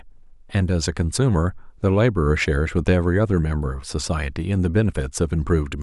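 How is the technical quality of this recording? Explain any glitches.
No glitches turn up anywhere in this speech recording, and the signal carries through without any dropout, distortion or other technical fault.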